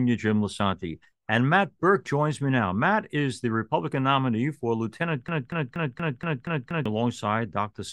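At 5.28 s the speech locks into a broken-record loop that runs until 6.86 s. A fragment about 0.24 s long plays seven times, back to back and identical each time, so the sound stutters mechanically rather than continuing. The playback chain likely stalled and kept re-sending the last buffer it held. Whatever speech belonged in that stretch is missing.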